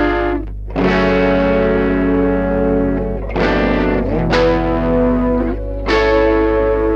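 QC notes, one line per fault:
Throughout: mains hum. A steady low tone sits under the music at 50 Hz, with a few low harmonics stacked above it, and it does not change with the programme material. Its level is high, only about 10 dB below the music. The cause is power-line coupling into the signal path, most plausibly a ground loop between connected equipment or pickup from a nearby transformer.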